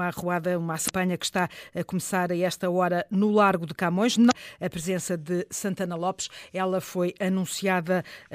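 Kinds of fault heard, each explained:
Damaged data in a compressed stream: corrupted bytes make the decoder misread frames and lose sync. Brief glitches, about 45 ms each, interrupt the speech at 0.85 and 4.27 seconds.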